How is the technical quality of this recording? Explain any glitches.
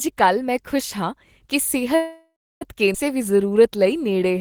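The recording has three network-related glitches in quick succession, all after about 1.9 s.

From 1.95 to 2.63 s, right after "ਮੈਂ ਖੁਸ਼ ਹਾਂ ਕੀ", there is a call audio freeze. Packets were likely delayed in transit, so the jitter buffer ran dry. The receiver stretched the last sound into a fading buzz or hiss for about 0.66 s, including roughly 0.3 s of silence, then resumed where it left off with nothing lost.

At 2.93 to 2.96 s comes a skip ahead. Audio was discarded while later audio was already queued, so playback jumps past about 0.4 s of speech. The two sides are joined almost directly, with only a very short fill at the seam.

From 3.15 to 4.39 s a jitter buffer slow-down follows. The receiver rebuilt its reserve by repeating individual pitch periods and pause fragments, adding 105 ms. Speech runs at about 92% speed with unchanged pitch, so sounds come out slightly drawn out.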